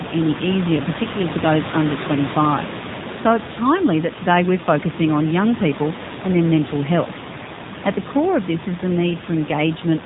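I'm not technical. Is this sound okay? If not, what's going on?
No. From start to finish the speech sounds thin, buzzy and robotic, with nothing above about 3.8 kHz. That is the AMR narrowband mobile codec, the old phone-call compression that rebuilds voices from a simple model and drops the crisp upper sounds. The room noise behind it is part of the recording.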